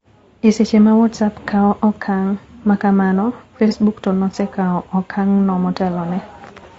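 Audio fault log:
throughout, low-delay AAC compression: the speech was likely coded with AAC-ELD, whose short frames can't resolve pitch harmonics finely, and the damage fits a bitrate near 32 kbps. The speech sounds rough and grainy, with noise filling the gaps between harmonics and a thin, synthetic-sounding top band.
3.68–3.73 s, AAC frame loss with concealment: about 30 ms of coded audio went missing, which fits a single lost frame, and the decoder patched it by repeating the last good spectrum with altered phase. The result is a brief smeared, noisy blur where the speech loses its clarity.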